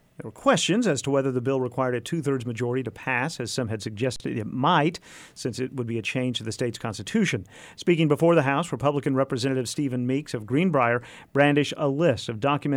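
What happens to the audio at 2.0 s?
Nothing goes wrong at 2.0 s; the audio there plays through intact, with no dropout, click or other fault.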